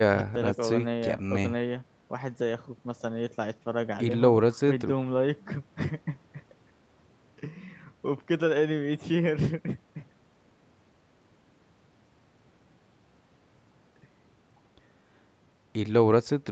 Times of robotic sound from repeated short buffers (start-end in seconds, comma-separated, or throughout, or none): none